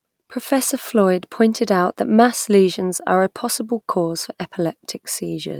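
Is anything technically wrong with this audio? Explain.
No, nothing technically wrong turns up here; the speech comes across as it should, with nothing that needs explaining.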